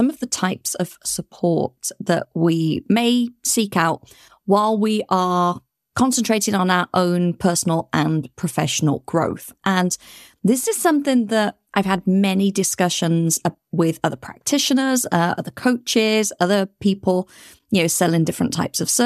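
Nothing in this speech recording stood out as a technical problem on listening.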